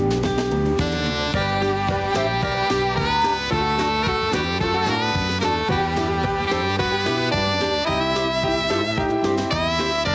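From the start and through the whole clip there is gain pumping, with a level swing of about 5 dB, so loud and quiet passages sit closer together and the sound comes across squashed. The likely cause is input gain set far too high for the microphone, with a fast limiter or compressor pulling the level down whenever a loud sound arrives and releasing it afterwards.

At 2.89 s a loudspeaker feedback squeal begins and lasts until 3.49 s. A single tone at 920 Hz swells out of the audio over roughly a third of a second and peaks at about 5 dB above the rest of the signal. The microphone was picking up the loudspeaker it was feeding, and at 920 Hz the loop gain went above one, so that frequency kept reinforcing itself. The call's microphone processing also limits the band to nothing above 8 kHz.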